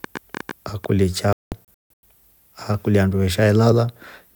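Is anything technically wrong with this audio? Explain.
Yes, there are two faults. The first is a train of clicks from 0.04 to 0.85 s, likely from electrical interference or a faulty connection injecting pulses. It adds about ten similar clicks, roughly ten per second at an uneven pace, heard as popping about 10 dB above the speech.

The second is a digital broadcast dropout from 1.33 to 2.04 s. The receiver lost valid frames and muted until clean data resumed, leaving about 480 ms of silence in several holes across 704 ms, the longest 192 ms. Whatever was transmitted during those gaps is gone.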